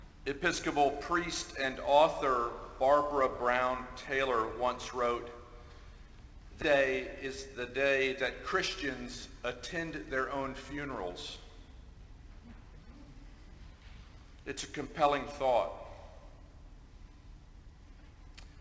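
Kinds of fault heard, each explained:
Skip ahead: around 6.62 s roughly a second of audio just vanishes, and playback jumps forward with no gap, the two sides stitched almost directly together.
Jitter buffer speed-up: the buffer was trimming short pitch-period chunks to shed backlog, so in three stretches between 7.2 and 13.6 s things run 4 to 8% fast without any pitch change.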